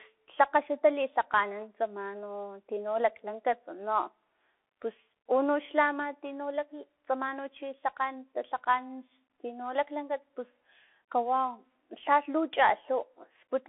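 Throughout the clip, the speech has passed through a Bluetooth CVSD headset codec. Each sample is coded as a single up-or-down bit with an adapting step size, which fits a 64 kbps link. The band is held to roughly 300 Hz to 3.5 kHz, with nothing above 3.8 kHz. The result sounds thin and muffled. Quick, loud high sounds overrun the step and break up, s sounds turn scratchy, and a grainy hiss sits under the speech.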